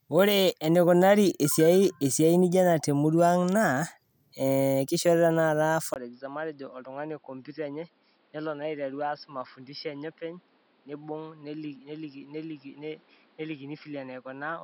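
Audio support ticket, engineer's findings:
Input switched to a poorer device from 5.94 s to the end. Speech suddenly duller and boxier, nothing above 5.4 kHz, with a 20 ms dropout at the switch. Level drops about 10 dB, and a new noise floor sits roughly 30 dB under the speech. Likely the OS or app flipping to another mic or a headset call profile mid-recording.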